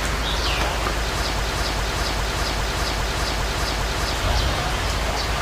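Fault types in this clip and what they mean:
Broken-record loop: From about 1.40 s to 4.13 s, a 0.40 s fragment of the audio plays seven times back to back, identical each time, so the sound seems stuck in place. What should have been heard during those few seconds is gone. The likely cause is a stall in the player, encoder or stream, which kept pushing out the last chunk it had in hand until the data started moving again.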